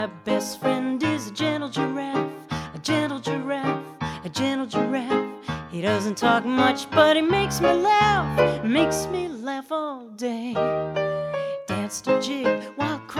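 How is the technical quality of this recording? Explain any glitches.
The technical quality of this recording is sound, with no glitches to explain.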